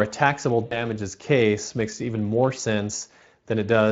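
Speech throughout, with plainly audible Speex codec damage across the whole clip that fits a bitrate around 20 kbps. The CELP coder has too few bits to model the excitation faithfully, so the voice sounds hoarse and noisy. On a spectrogram, harmonics look grainy and less sharply defined, with noise-like energy filling the gaps between them. The waveform shows rough, irregular cycles instead of clean periodic pitch pulses.

Two dropouts show VoIP packet loss concealed by the speech codec, from 0.65 to 0.86 s and from 2.95 to 3.02 s. Each fits about 60 ms of missing audio, roughly three 20 ms frames. During each gap the decoder reuses its last pitch and filter and lowers the gain frame by frame, so the sound smears into a fading buzzy tone or coloured noise. On a spectrogram this appears as flat, frozen energy that dims. In the waveform it shows as a repeated, shrinking pattern, followed by a weak or distorted stretch before normal level returns.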